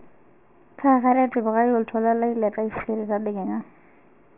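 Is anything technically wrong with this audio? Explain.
Yes, aliasing runs through the whole speech clip. It sounds like a drop to roughly 6 kHz without filtering, so content above 3 kHz folds back, adding gritty, metallic sibilance about 20 dB down, not just the dullness of plain band-limiting.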